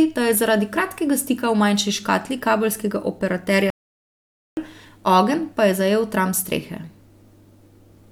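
At 3.70 s there's a playback stall: the speech cuts to silence for about 0.87 s, likely a starved buffer or blocked player thread, then resumes at 4.57 s.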